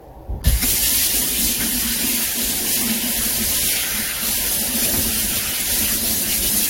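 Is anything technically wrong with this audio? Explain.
Yes. Throughout the audio there is audible generation loss: a swirly, smeared, hollow texture with blurred attacks and nothing above 16.6 kHz. This likely comes from repeated lossy coding, consistent with about four AAC-LC passes, each re-quantising on a shifted frame grid so the errors accumulate.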